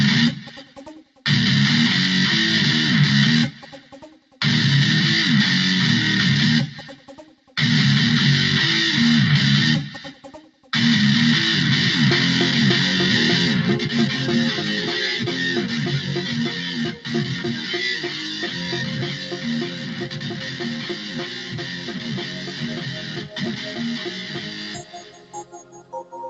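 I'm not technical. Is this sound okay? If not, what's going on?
No. A noise suppressor built for speech was left running on this audio, so the noise suppressor is applied to music or sounds it wasn't designed for. It treats steady, held or lingering sound as background noise and turns it down, while sudden sounds pass through. The result is a level that keeps rising and sinking by a clearly audible amount across the whole clip, giving a pumping, slightly hollow feel.

At specific moments you can hear sound cut by the noise suppressor. Held or fading parts drop noticeably in level, or their endings are clipped short, at 0.63–1.23 s, 3.52–4.38 s, 6.92–7.54 s, 10.14–10.69 s, 16.56–17.7 s, and more lightly at 18.44–18.63 s. The longest stretch runs from 19.11 s to 26.12 s, where sustained sound keeps sinking for about seven seconds. The dull top end, with nothing above 8 kHz, comes from the call connection and is expected.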